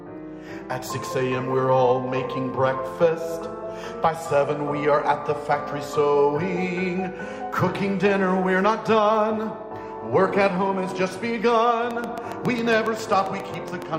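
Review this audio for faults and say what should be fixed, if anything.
A train of clicks runs from 11.91 s to 13.83 s: around fifteen near-identical pulses at a regular 7.3 per second, each peaking roughly 10 dB above the surrounding sound, so the ticking stays audible over everything. On a waveform they appear as evenly spaced thin spikes; on a spectrogram, as vertical broadband lines at equal intervals. The steady pace points to a likely cause in periodic interference from nearby equipment or a faulty connection or power supply. Preventing it means shielding and separating cables from such equipment and checking connections and the power supply before recording.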